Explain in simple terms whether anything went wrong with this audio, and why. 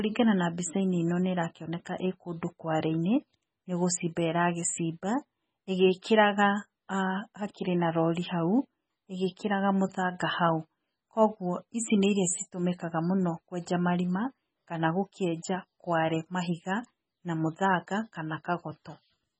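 MP3 compression damage runs through the whole recording, from the first second to the last. The speech has nothing above about 9 kHz, so s sounds are dull, and the rest has a watery, swirling edge, with sharp sounds smeared. This is likely from squeezing the file hard to save space: the encoder drops the high treble and discards quieter details, which flicker in and out moment to moment.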